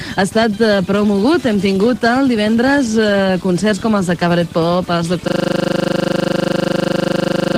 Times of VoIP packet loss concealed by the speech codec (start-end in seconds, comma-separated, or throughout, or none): none